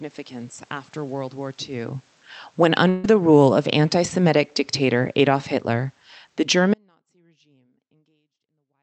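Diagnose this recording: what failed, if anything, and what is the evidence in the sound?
At 2.89 to 3.16 s the speech smears into a held, fading tone, then skips ahead about 140 ms. This is a burst of packet loss in the network.

From 6.74 s to the end, the speech cuts abruptly to a faint residue about 40 dB down. This audio dropout is likely a broken analogue connection.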